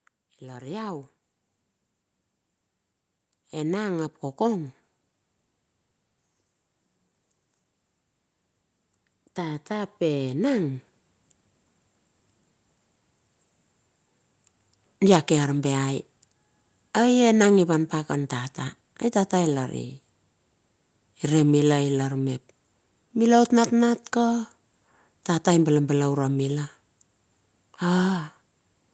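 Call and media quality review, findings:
Automatic gain rising on speech. Level and background swell together at 0.39–1.13 s (about 4 dB), 3.51–4.77 s (about 4 dB), 9.35–10.87 s (about 6 dB). Probable component: AGC judging input too quiet. Gain ramps up gradually.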